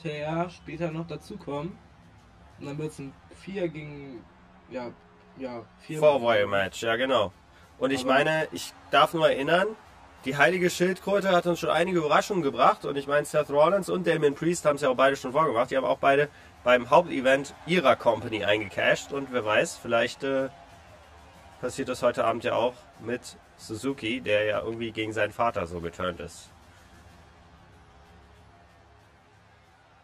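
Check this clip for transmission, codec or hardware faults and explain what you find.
There's one fault, running the whole way through: channel delay (comb filtering). One side lags roughly 10 ms, so summing cancels evenly spaced notches from about 40 Hz up, leaving everything hollow and phasey.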